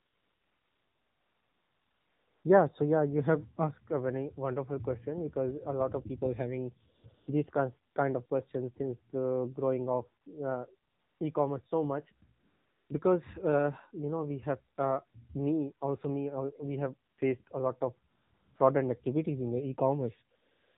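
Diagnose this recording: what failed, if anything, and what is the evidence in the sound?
Codec stage: the AMR narrowband mobile codec runs throughout. Nothing passes above 4 kHz, and the speech is buzzy and synthetic, which fits a low 7.4 kbps mode.

Call-processing stage: AMR comfort noise fills sixteen pauses from 0 to 20.77 s, lasting 20 ms to 2.4 s. The longest sits at the start, and others come after "these kinds kind of" and before "because uh you know". In each, the real background switches to smooth, steady synthetic noise.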